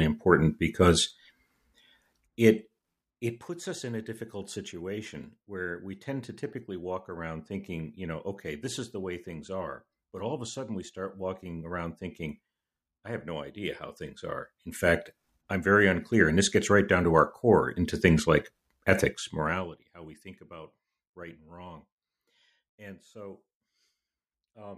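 No technical faults are audible.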